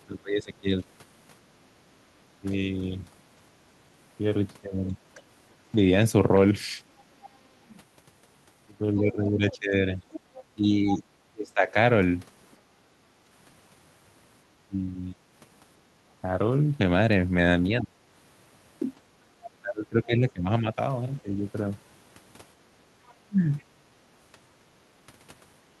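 From the start of the clip right through to 23.63 s, the talker's speech keeps dipping and thinning whenever the far side is also talking, adding up to roughly five seconds of affected audio, with the deepest drops around 20 dB. That's speech suppressed in double talk, and the likely cause is the echo canceller failing to tell the near-end talker apart from loudspeaker echo, so it clamps down on both and takes the speech with it.

Between 7.24 and 12.56 s you can hear the other side's voice leaking through. It sits roughly 20 dB under the main speech. It likely comes from the device's loudspeaker output getting back into the mic without being fully cancelled. A second, much quieter patch shows up from 21.2 to 23.64 s, down at roughly 35 dB below the speech.

Right after the first leak, from 12.85 to 12.97 s, the room background briefly ducks by about 7 dB. That's background gated by the echo canceller: while the loudspeaker was active, the canceller pulled the mic level down hard, and the room tone comes back once it releases. 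The same thing happens again between 22.64 and 24.7 s, this time dipping about 9 dB, although the actual gating only adds up to roughly 70 ms within that stretch. Across all of this you can also hear the Opus call path's top end rolling off at around 12 kHz.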